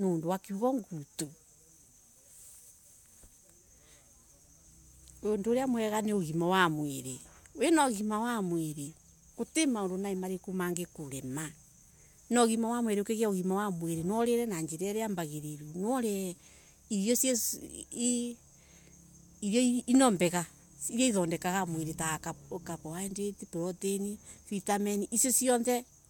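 No technical faults are audible.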